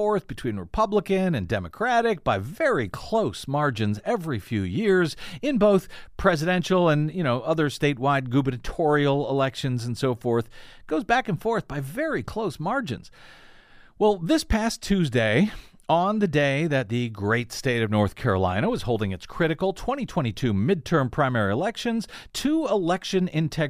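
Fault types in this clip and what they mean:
No technical faults can be heard anywhere in the speech. Nothing in the recording stands out as a problem to describe.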